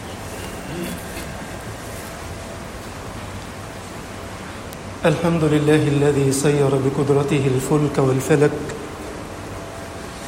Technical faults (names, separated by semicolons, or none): bit error spike